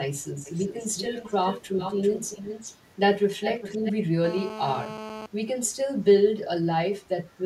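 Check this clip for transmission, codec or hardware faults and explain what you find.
Two faults are present in this speech clip: an echo leak and a GSM phone buzz.

From 0.45 to 2.74 s, and again from 3.42 to 3.93 s, a delayed copy of the speech trails the original by 389 ms. It sits roughly 10 dB below the direct speech. This is likely an echo leak. The far end is on a loudspeaker. Its echo canceller missed part of what its microphone heard and sent it back. The result is a lagging double.

From 4.24 to 5.26 s a hard, raspy buzz sits under the speech, about 11 dB below the signal. It repeats 217 times a second and is rich in harmonics. This is GSM phone buzz. A nearby 2G phone on a call transmits in bursts at that rate. The audio circuitry rectifies those radio pulses into sound. It ignores the speech entirely and holds steady while it lasts.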